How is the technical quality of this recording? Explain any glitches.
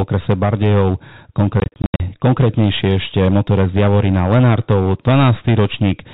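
The recording has two faults: constant overload distortion and a burst of dropouts, all carried over a telephone-band G.711 channel that cuts everything above 4 kHz.

Hard clipping runs throughout: a stage is driven about 7 dB past its limit, so around a tenth of the waveform gets sliced flat, giving harsh fuzz on louder speech.

Packet loss filled with silence occurs from 1.6 to 2.0 s, just before "konkrétnejšie ešte motorec": lost packets, which fits 20 ms packets, were replaced with silence, leaving 240 ms of holes, the longest 80 ms.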